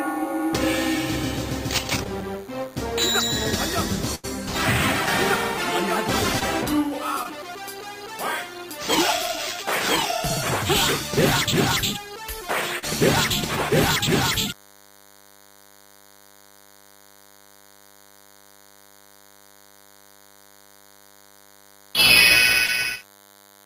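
Running under the whole clip is a DECT cordless phone buzz: a nearby handset or base pulsing every 10 ms gets rectified into the audio, leaving a thin 100 Hz buzz roughly 30 dB below the signal. A spectrogram shows evenly spaced horizontal harmonic lines stacked from 100 Hz upward.

At 2.03 s comes the first short concealed packet loss. About 20 ms never arrived in time, and the receiver extrapolated the preceding sound before blending back. It is heard as a brief smear or wobble, and on a spectrogram as a momentary frozen, smoothed patch.

From 4.15 to 4.25 s a burst of packet loss removes about 80 ms. The decoder holds the last sound and fades it, so it turns into a dwindling sustained tone or hiss. The audio then jumps ahead, with a visible decaying envelope and a hard resume in the waveform.

Further short concealed losses follow at 6.39 s, 7.23 s, 12.79 s and 22.66 s. Each drops about 20 ms, except the longer one at 12.79 s, which fills about 40 ms.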